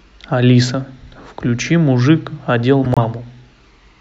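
At 2.84 s, running to 2.98 s, the speech is broken by a corrupt frame decoded: damaged bits in a handful of consecutive compressed frames were still decoded, so misread gains and codes threw energy into frequencies unrelated to the speech. It sounds like a harsh squeaky burst, lasting about 0.13 s. Unlike packet-loss concealment, which mutes, fades or smoothly repeats the previous sound, this adds loud foreign content that was never there.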